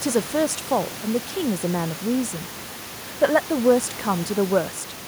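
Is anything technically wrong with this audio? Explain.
No, nothing is technically wrong with this audio.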